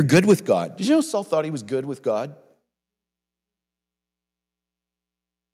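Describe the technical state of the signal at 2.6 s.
The speech signal at 2.6 s is intact, with no audible fault at that moment.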